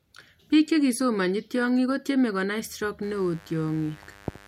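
A steady, raspy buzz sits under the speech from 3.03 s to the end at 4.48 s, roughly 25 dB below it. This is mains buzz: sharp switching spikes on the 50 Hz supply, twice per cycle, leaking in through a dimmer, rectifier or missing shield, with harmonics reaching several kilohertz.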